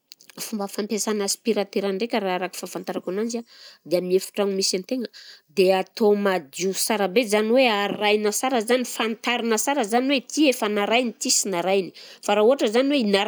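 No technical faults can be heard anywhere in the recording.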